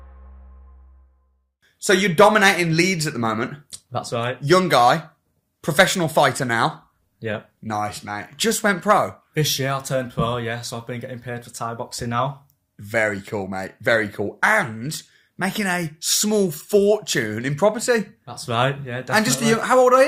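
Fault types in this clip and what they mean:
No technical faults are audible anywhere in the audio.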